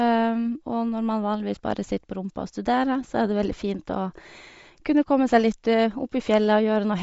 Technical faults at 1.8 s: Bluetooth LC3 compression

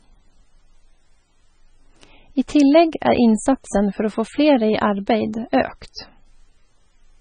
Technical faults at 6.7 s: MP3 compression

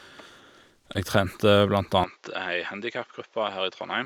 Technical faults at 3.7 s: input switched to a poorer device

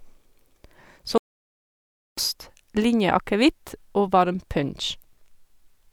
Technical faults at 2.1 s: audio dropout to silence

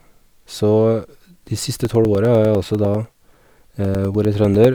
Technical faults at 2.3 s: periodic USB or driver dropouts

